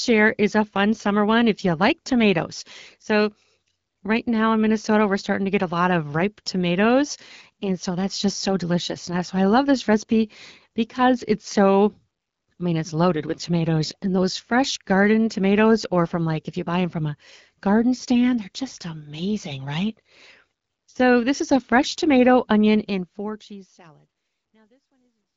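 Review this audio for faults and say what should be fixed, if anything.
Nothing here needs fixing. The speech fades out smoothly over roughly the last three seconds, and its content stops near 7.5 kHz with light coding texture, which fits HD Voice AMR-WB at about 12.65 kbit/s.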